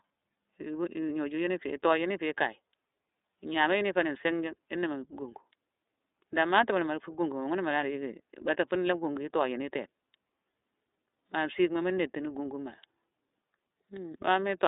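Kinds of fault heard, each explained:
iLBC codec: a narrowband VoIP codec that codes each frame's excitation independently of the previous frame. Here the speech is confined to a telephone band of roughly 300 Hz to 3.7 kHz, so it sounds thin and lacks low body and upper sibilance. The codec damage is plainly audible throughout as a rough, slightly synthetic texture. The coarse frame-by-frame character fits the 30 ms frame mode at about 13.33 kbps.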